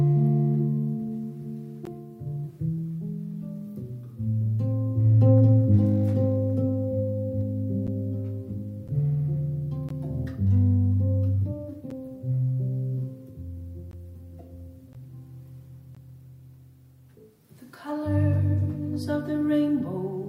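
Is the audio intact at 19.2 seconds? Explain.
Yes, the audio is intact at 19.2 seconds, with no fault heard at that moment.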